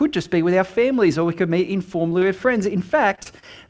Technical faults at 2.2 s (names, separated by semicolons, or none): short concealed packet loss